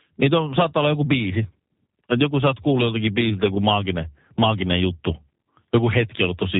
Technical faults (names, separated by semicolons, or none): G.729 codec